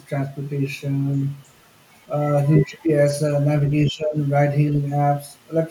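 A speech recording with two echo-control problems. From 2.45 to 2.85 s the other side's voice leaks through, faint at roughly 20 dB below the talker, likely residual loudspeaker echo that the echo canceller failed to subtract from the microphone signal. From 3.86 to 4.17 s the talker's speech is suppressed in double talk, dropping by around 20 dB for roughly 0.3 s, likely because the canceller mistook near-end speech for echo while both sides spoke and attenuated everything.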